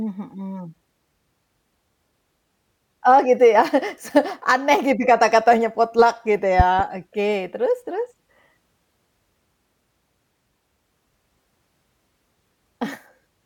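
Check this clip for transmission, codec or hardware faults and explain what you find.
One hardware fault appears, a loud pop between 6.60 and 6.82 s. Two sharp pops sit about 10 dB above the speech, likely from a voltage spike. Each shows as a tall waveform spike and a full-height vertical spectrogram stripe, with the speech continuing underneath.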